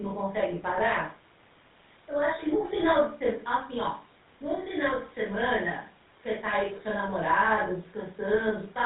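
GSM full-rate codec damage runs throughout the speech. The codec models the vocal tract and drives it with a sparse, regular pulse train, so the voice turns buzzy and gravelly, and everything above 4 kHz is gone. The sound fits 13 kbps GSM.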